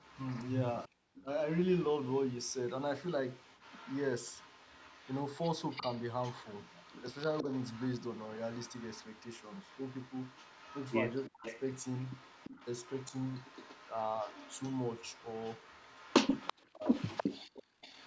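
Echo leak runs from 0.0 to 17.24 s and again from 17.81 s to the end: a faint delayed copy of the speech trails the original by 339 ms, sitting roughly 25 dB below it. This is likely an echo canceller on a loudspeaker end failing to fully cancel what its microphone picked up from the speaker, so the leftover was sent back down the line.

Background gated by the echo canceller occurs at 0.89 to 0.95 s, a brief hole of well under a tenth of a second in which the room sound falls by about 40 dB and then returns. The canceller, reacting to loudspeaker playback, clamped the microphone hard for that moment, so the ambient bed drops out before the background comes back.

Speech suppressed in double talk appears three times: 11.3 to 11.44 s, 16.52 to 16.82 s, and 17.2 to 17.81 s, the last and longest lasting well over half a second. In each the speech sinks by something like 40 dB, dipping or cutting out in pieces. 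The likely cause is both sides talking at once, with the canceller unable to tell the near talker from the echo and turning everything down. The high end is already absent above 8 kHz from the call's microphone path.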